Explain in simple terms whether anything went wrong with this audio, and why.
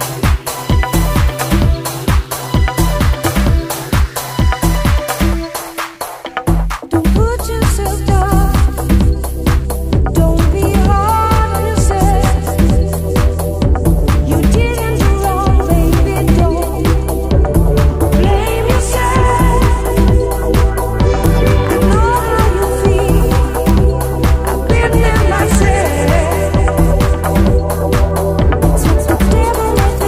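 Integer overflow causes five sudden, violent cracks at 15.94, 21.26, 23.69, 25.55 and 29.79 seconds. On loud peaks, the number holding the sound ran past its maximum and flipped to the opposite extreme, producing a sharp snap that is much harsher than clipping's flattened fuzz.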